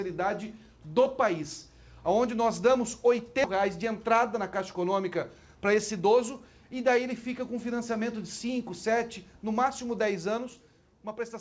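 A skip ahead occurs at about 3.44 s. A run of audio was thrown away, either lost in transit or discarded when the jitter buffer overfilled while later audio was already queued. Roughly four tenths of a second is missing, and nothing fills the hole. The material on either side is butted together, so playback lurches forward abruptly and the end-to-end delay drops by about the same amount.

Jitter buffer speed-up follows from 3.56 s to 6.16 s. The buffer was still holding more audio than its target, so the receiver repeatedly cut out tiny slices, each one or a few pitch periods long, to drain the excess. Over those 2.6 s the audio plays about 6% faster with its pitch unchanged. It sounds slightly rushed, and roughly 150 ms of material disappears in small pieces. Throughout, the band stops at 8 kHz, which fits a wideband call codec such as G.722.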